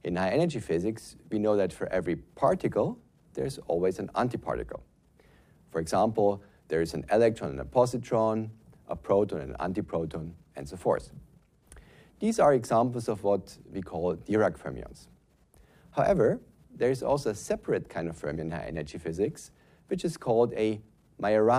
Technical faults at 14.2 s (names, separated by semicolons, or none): none